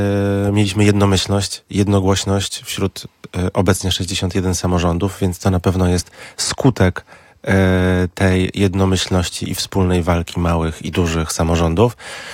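Nothing here goes wrong at any point, so there's no fault to walk through.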